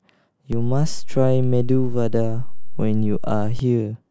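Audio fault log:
0.53 to 3.59 s, DC step. The waveform's zero line jumps by about -18 dBFS at 0.53 s and holds, then drops back at 3.59 s. Each sudden shift in the baseline gives a low thump. The speech carries on unchanged over the offset.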